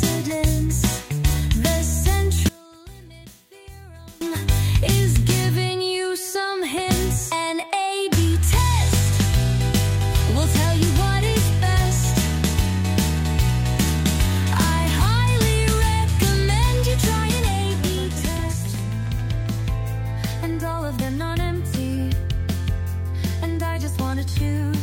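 From 2.49 to 4.21 s the audio drops by about 22 dB to a faint copy. One channel inverted is the likely cause, cancelling centred sound when summed to mono.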